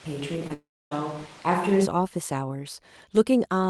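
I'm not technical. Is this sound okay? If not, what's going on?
No. From the start until about 1.84 s the speech sounds roomy and hollow, with thin bass and more background noise, likely a switch to a distant microphone, such as a camera's, instead of the close one.

At about 0.47 to 0.52 s there's a brief smear or wobble. This is short concealed packet loss: a moment of the call arrived late, and the receiver patched it by stretching the preceding sound.

From 0.54 to 0.93 s the sound turns into a fading buzz or hiss, then goes silent for about 0.28 s before resuming with that part missing. This is likely a long network dropout.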